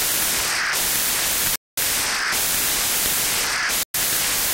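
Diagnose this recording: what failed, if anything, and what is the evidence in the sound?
A Bluetooth stall, twice: the audio drops to silence from 1.56 to 1.77 s, a gap of about 217 ms, and again from 3.83 to 3.94 s, about 112 ms. Each break is a hard cut to nothing followed by the sound returning. The stage is the wireless playback link, likely the headphones' receive buffer running empty while radio interference held packets back, so output simply stopped until retransmitted data arrived and refilled it.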